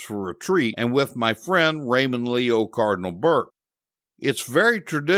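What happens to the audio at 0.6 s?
Nothing goes wrong at 0.6 s: the speech runs through that moment intact, with no dropout, click or distortion.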